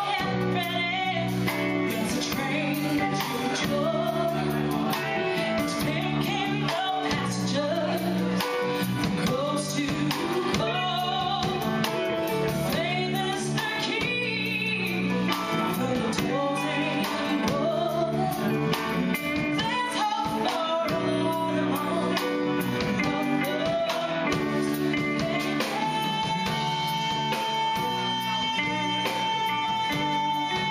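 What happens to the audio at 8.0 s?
Nothing goes wrong at 8.0 s; the audio plays through that moment intact, with no dropout, click or distortion.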